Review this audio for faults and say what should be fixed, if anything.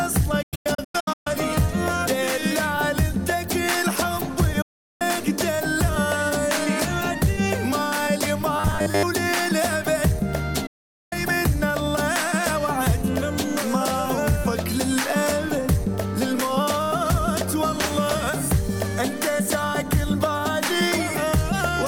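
Digital broadcast dropout at 0.42 to 1.27 s, 4.62 to 5.02 s and 10.66 to 11.13 s. The receiver mutes on failed frames, fading out in about 8 ms. The first event is scattered holes, the longest 0.13 s. Stronger reception or error protection would prevent this.

Robotic sound from repeated short buffers, 8.56 to 9.04 s. A rigid 100 Hz buzz replaces most of the sound. This is likely a 10 ms buffer looping while audio arrives late. Larger buffering would prevent it.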